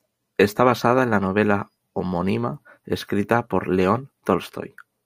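Listening closely, nothing in the speech stood out as a technical problem.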